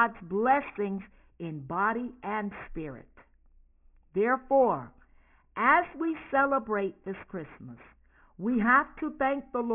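Aliasing runs through the whole speech clip: the audio was resampled, which fits a drop to a 6 kHz rate, without a low-pass filter, so content above 3 kHz folds back down as gritty, metallic sibilants about 20 dB under the speech. A spectrogram shows energy packed hard against 3 kHz, with mirrored harmonics.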